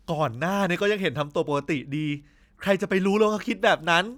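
Speech with no technical faults.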